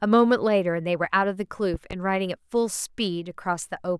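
At 1.74 s a loud pop breaks into the speech, and a second follows before it clears at about 1.95 s. Each is a sharp thump, peaking a few decibels above the speech, which continues underneath. The likely cause is a sudden voltage pulse, such as a plug, switch or static discharge, entering the signal chain. On a waveform each pop is a tall spike standing above the speech envelope; on a spectrogram, a thin vertical stripe across all frequencies.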